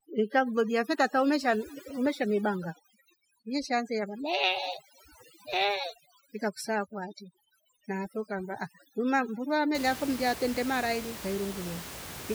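From the start to about 9.75 s the speech carries overdone noise removal. The noise reducer was set so aggressively that frequency bands sitting near its noise estimate are pulled down or gated off, taking the quieter parts of the voice with them. The room noise, roughly 12 dB under the speech, collapses into near silence speckled with twinkling musical tones. On a spectrogram the background shows isolated flickering dots instead of even noise, and the speech harmonics look patchy.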